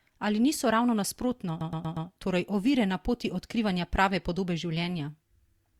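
A speech clip with repeated frames: right after "niso ravno nasprotno", from 1.60 to 2.07 s, a 108.8 ms chunk plays four extra times, stuttering before "torej ovire na poti". That adds 476 ms, which fits a run of six compressed frames getting written out again.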